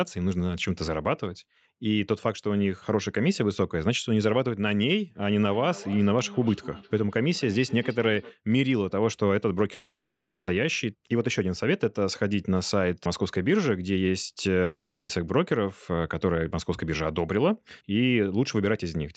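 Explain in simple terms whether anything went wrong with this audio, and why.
From 5.41 to 8.39 s, each stretch of speech comes back as a faint, thin, ringing copy roughly a third of a second later. This is feedback echo between two devices. Two phones or computers in the same room were on the call. One played the other's sound aloud, and that microphone picked it up and sent it round again. Each device's echo canceller only removes what that device itself plays, so this loop gets through.

Twice the audio stops. At 9.73 s, the last sound carries on as a fading buzz, then goes silent for about 0.4 s before speech resumes at 10.49 s, with 0.74 s of the original missing. At 14.63 s the same happens more briefly: 0.46 s is lost and about 0.25 s of it is silent, until 15.11 s. These gaps are likely a long network dropout, where no audio reached the listener and the receiver papered over the hole before giving up.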